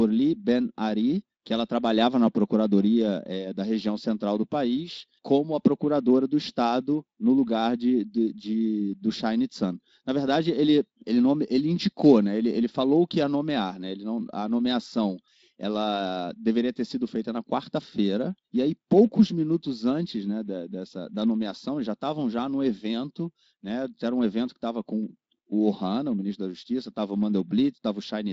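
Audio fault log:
Nothing to log; the speech carries a Speex codec stage with the band topping out at 7.6 kHz, and no fault found.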